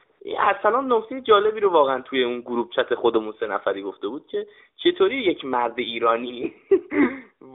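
Right at the start of the speech, from about 0.04 to 0.20 s, there's a stretch of AMR comfort noise. The phone decided nobody was talking and stopped sending speech frames for 160 ms, so the receiving end filled the gap with synthetic hiss built from a rough level-and-spectrum sketch. You hear the real background swapped for a smooth, even noise that switches in and then out, sitting inside the narrow 300 Hz to 3.7 kHz AMR narrowband band, whose light coloration fits the 12.2 kbps mode.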